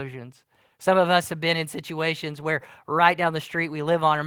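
No faults detected in the speech; nothing in the signal chain is audibly failing.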